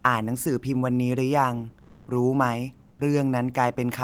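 A speech recording in which the natural room background twice gives way to a smooth, featureless hiss: from 1.81 to 2.07 s the fill is about 5 dB louder than the surrounding background, and from 2.89 to 2.99 s it is about 2 dB quieter. This is comfort noise in place of the background, likely from discontinuous transmission of the kind Opus DTX uses, where the sender goes quiet in pauses and the receiver synthesises noise instead.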